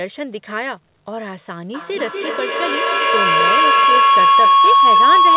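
From 1.74 s to the end, a steady tone near 1 kHz swells out of the speech, peaking about 11 dB above the speech. This is feedback howl. Two devices in the same room were on the call, so each trip from loudspeaker back into microphone added level. The repeats, spaced around 200 ms apart, narrowed to the frequency the loop favoured and kept climbing.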